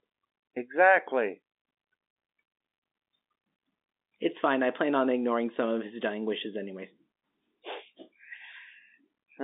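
No technical faults occur in this speech at any point; it carries the band-limited sound of G.711 telephone coding, with nothing above about 3.7 kHz.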